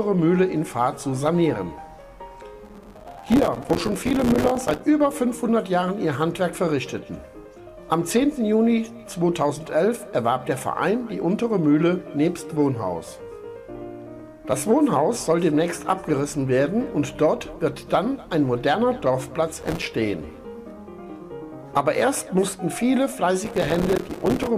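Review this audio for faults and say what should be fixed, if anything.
Processor overload crackle at 2.65–4.80 s, 19.61–19.86 s and 23.44–24.47 s: short silent gaps, each a few milliseconds, tear through the sound. Fix it by raising the buffer size or lightening the processing load.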